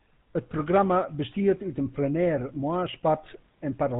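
Across the whole speech clip the audio carries the GSM full-rate codec, with plainly audible damage. The codec models the vocal tract and excites it with a sparse, regularly spaced pulse train rather than the real waveform, so fine detail of the voice is lost. Nothing above 4 kHz survives, which gives a band-limited, buzzy and gravelly texture consistent with a 13 kbps full-rate encode.

From 0.55 to 0.62 s the first burst of GSM bit errors occurs. Corrupted filter, pitch and gain parameters reach the decoder, so the spectrum bends and the level jumps for a few consecutive frames. It is heard as a short squawk with a gargling pop. A second, briefer burst follows at 2.55 to 2.58 s and again breaks the voice into squawks and pops. Its shorter length fits only a couple of damaged frames.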